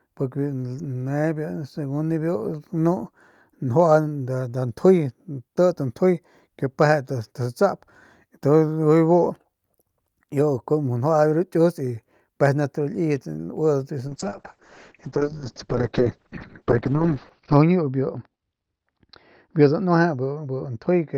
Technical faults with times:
14.09-21.17 call bitrate drop

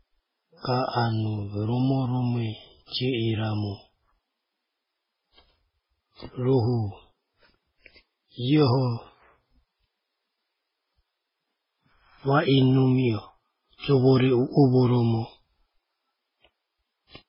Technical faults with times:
0.00-17.29 transcoding between lossy codecs

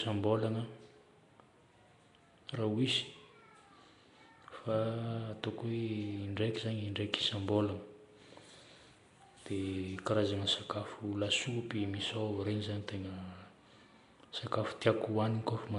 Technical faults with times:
0.00-15.79 Nellymoser compression

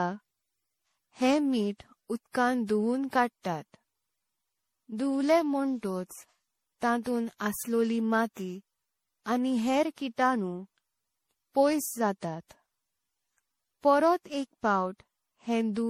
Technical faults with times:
0.00-15.89 generation loss

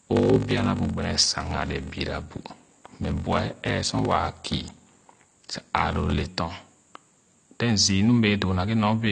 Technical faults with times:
0.00-9.11 AAC compression
0.00-6.29 block size mismatch (padded)

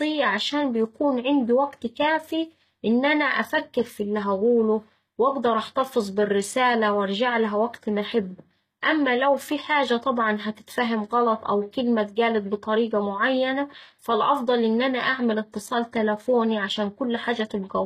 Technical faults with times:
0.00-17.86 HE-AAC compression

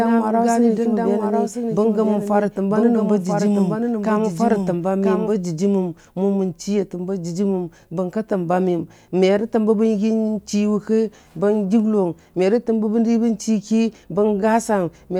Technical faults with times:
0.00-5.32 doubled audio track

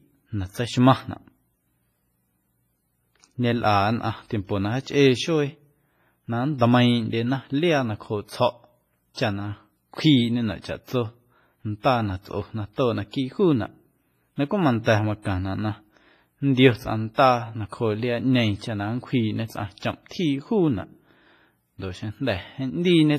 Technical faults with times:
0.00-23.18 WMA compression
9.14-9.17 pre-echo
14.84-14.86 pre-echo
17.14-17.18 pre-echo

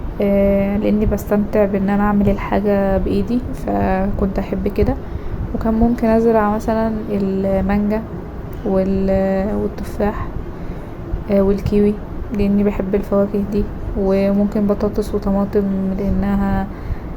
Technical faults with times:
none

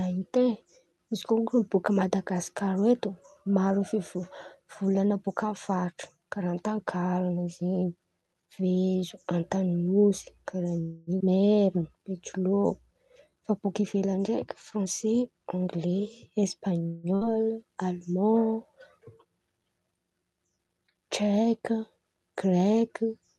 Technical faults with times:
10.81-11.10 call audio freeze
11.19-11.23 skip ahead
11.25-13.32 jitter buffer slow-down
14.76-16.81 jitter buffer speed-up
16.87-17.06 call audio freeze
17.15-17.32 burst of packet loss

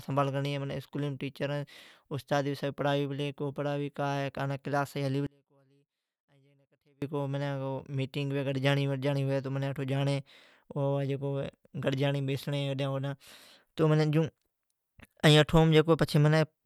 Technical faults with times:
5.27-7.02 one channel inverted

